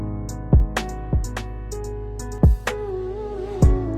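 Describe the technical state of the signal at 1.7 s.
At 1.7 s you're right in the middle of a doubled audio track, which runs from 0.6 to 2.38 s. A second full-band copy of the sound trails the original by roughly 0.7 s, sitting a few dB quieter, with no decay or room colour, so it reads as a flat, dry echo rather than reverb. It likely comes from the signal being picked up again through a slower path, and it cuts in and out abruptly at those edges.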